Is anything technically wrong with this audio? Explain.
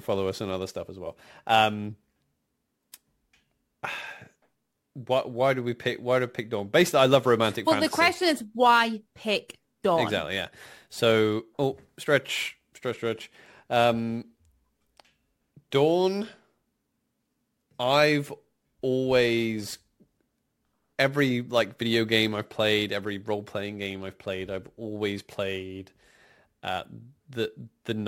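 Yes, there is pre-echo at 2.92 s and 15.71 s in this speech clip. A transform codec spread quantisation noise across a whole block, so noise sized for a sharp onset also filled the quiet moment before it. At 2.92 s a hiss about 19 dB above the background leads the attack by 15 ms; at 15.71 s, about 15 dB and 13 ms. Each attack sounds softened. The smear fits a block of about 26 ms, with no switch to short blocks.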